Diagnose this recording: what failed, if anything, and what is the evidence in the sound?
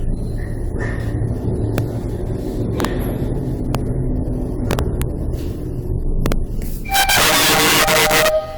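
Integer overflow in a fixed-point gain or sample-format conversion stage: peaks past full scale wrap to the opposite sign instead of being limited, giving violent cracks at 1.78 s, 2.80–2.85 s, 3.75 s, 4.71–5.02 s, 6.26–6.32 s and 6.94–8.28 s, where the overdrive reaches about 9 dB. Clipping would only flatten those peaks into a duller buzz.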